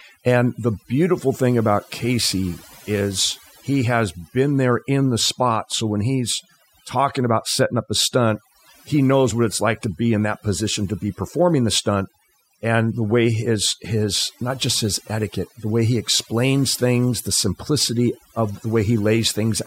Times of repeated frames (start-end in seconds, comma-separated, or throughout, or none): none